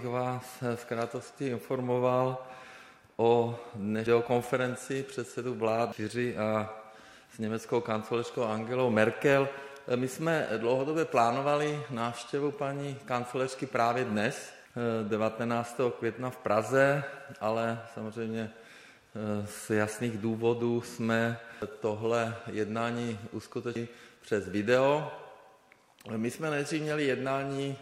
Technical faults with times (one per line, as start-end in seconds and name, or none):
4.07 damaged data in a compressed stream
5.92 damaged data in a compressed stream
14.65 damaged data in a compressed stream
21.62 damaged data in a compressed stream
23.76 damaged data in a compressed stream